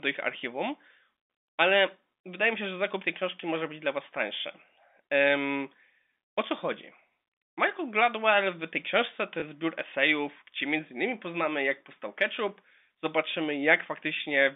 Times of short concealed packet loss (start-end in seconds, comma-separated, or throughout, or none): none